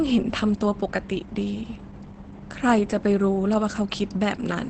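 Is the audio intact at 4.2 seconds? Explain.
No. Opus voice compression runs through the whole clip, including 4.2 s. The SILK speech coder, at a rate that fits about 12 kbps, cuts everything above 8.8 kHz and coarsely codes the excitation. The speech sounds muffled, hoarse and slightly robotic.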